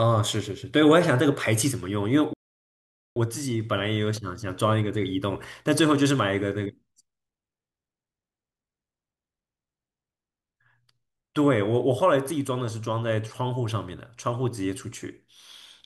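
At 2.33 s the speech cuts out mid-flow for about 0.83 s, a playback stall, likely the player starving for data, then picks up again at 3.16 s.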